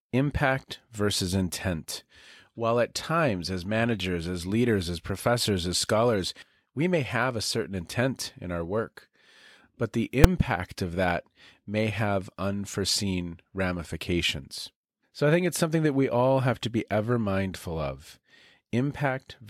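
A single sharp bang at 10.24 s, between "but the" and "of that may have", comes from invalid numbers at full scale: a 5 ms block of infinite or invalid values was pinned to maximum amplitude.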